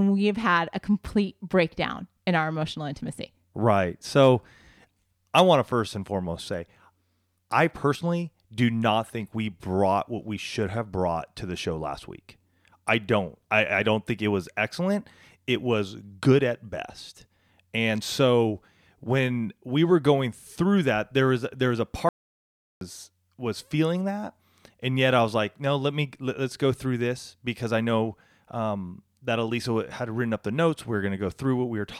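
An audio dropout to silence runs from 22.09 to 22.81 s: the speech cuts to silence with no room tone for 0.72 s, likely from lost input.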